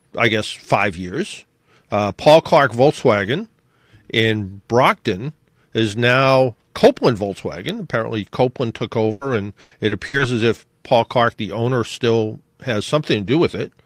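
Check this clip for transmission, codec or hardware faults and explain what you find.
Three transmission faults affect the speech, all between about 9 and 10 seconds.

Short concealed packet loss at 9.07 to 9.11 s: about 20 ms never arrived. The receiver extended the preceding sound to fill it, leaving a brief smear. On a spectrogram the spectrum runs on unchanged for a moment instead of moving with the speech.

Burst of packet loss at 9.11 to 9.23 s: right after, roughly 100 ms went missing. Concealment held the last sound and faded it rather than dropping to silence, so there is a fading sound and then a jump ahead. The waveform shows a decaying stretch.

Repeated packet loss (robotic sound) at 9.61 to 10.21 s: four separate gaps, the longest 100 ms, total about 200 ms, a third of that stretch. Each is patched by extending the prior sound, making it choppy. A spectrogram shows repeated frozen, smeared blocks with missing detail between them.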